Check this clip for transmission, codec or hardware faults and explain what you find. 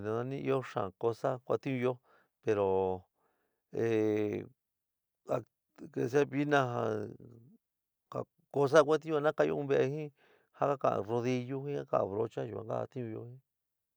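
Nothing stood out on a careful listen, so there's no fault to report in this speech recording.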